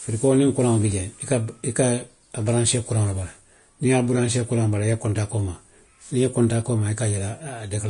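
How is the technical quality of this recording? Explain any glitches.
The recording has clearly audible lossy compression across its whole length. Vorbis compression, throughout: the speech stops abruptly at 10.5 kHz, and the treble that remains sounds hissy and grainy. This is likely low-quality Vorbis coding, consistent with roughly 34 kbps, which quantised the upper bands so coarsely that their fine detail became noise of similar energy.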